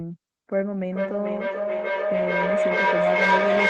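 From 0.9 s, feedback echo between two devices returns phrases roughly every 0.4 s, thin and ringing, piling up about 8 dB above speech rather than decaying.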